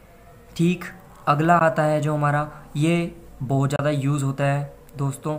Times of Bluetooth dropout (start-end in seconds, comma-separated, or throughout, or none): 1.59, 3.76-3.79